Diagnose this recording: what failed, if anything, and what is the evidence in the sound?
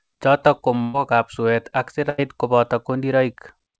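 Burst of packet loss at 0.82–0.96 s and again at 2.10–2.20 s, a network-stage failure on the call path. After "chotok ko", the sound is stretched for about 118 ms and fades, then resumes at "ab suet ak" with roughly 120 ms skipped. After "ab suet ak", an 83 ms stretch covers about 80 ms of lost audio. Consecutive packets arrived too late or not at all, so the receiver extended and attenuated the last sound it had. The band-limit at 8 kHz fits G.722 at 64 kbps.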